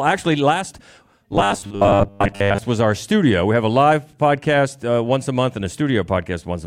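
From 1.33 to 2.58 s the speech takes on robotic sound from repeated short buffers: a rigid, metallic buzz fixed at 100 Hz, likely from a stream repeating the last 10 ms for most of that stretch. Unlike a plain dropout, the sound never goes silent and still roughly follows the words.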